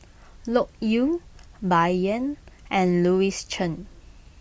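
No technical faults can be heard anywhere in this recording. At no point does anything in the audio point to a problem.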